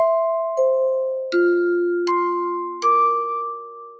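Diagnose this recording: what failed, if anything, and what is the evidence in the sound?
The failure is in call processing: a speech-tuned noise suppressor applied to music or sounds. Throughout, the level pumps by roughly 10 dB. Attacks pass but sustained parts and tails get pulled down as if they were noise. The band still stops at 8 kHz, as it should.

There's also sound cut by the noise suppressor from 3.52 s to the end, about half a second. The suppressor decided the sound was noise and dragged it down by about 15 dB at its deepest.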